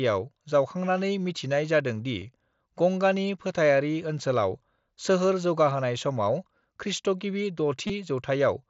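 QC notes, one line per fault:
2.2 s and 7.87–7.90 s, concealed Bluetooth headset packet loss. Headset audio dropped out for about 15 ms, then 22.5 ms after "समाव खृष्टगिबि". The receiver filled each gap by repeating recent waveform, so each run of lost packets comes through as a buzzy tone held at full level, with a small warble where real audio returns, through the mSBC wideband sound.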